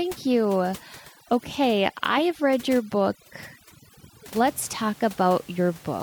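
From 0 to 4.45 s the background drops and breaks up into twinkling specks: overdone noise removal, strong enough to carve away quiet speech with the room noise.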